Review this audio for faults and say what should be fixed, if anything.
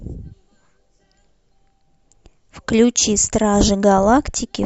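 Nothing needs fixing: the signal holds steady throughout, with no audible technical faults in the recording or its playback path.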